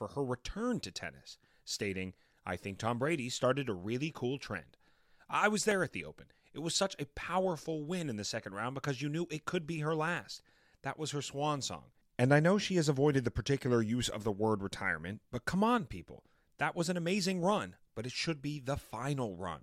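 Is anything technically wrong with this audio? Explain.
Yes, there is one fault, a repeated buffer at 5.71 s in this speech clip, between "cool trend I was" and "at the". New audio arrived late, so the device played its last 1.45 ms block once more, which fits a 64-sample buffer, and about a millisecond and a half of sound was lost. Because the block is so short, it comes across as a click rather than a stutter. On a waveform, the same tiny segment appears twice with an abrupt step at the join. A spectrogram shows a thin vertical broadband line there.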